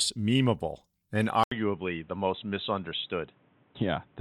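An input switched to a poorer device, likely, at 1.44 s: after a short gap of about 80 ms, the speech turns dull and boxy through to the end, with nothing above 3.9 kHz, new background noise about 35 dB below the speech, and much the same level.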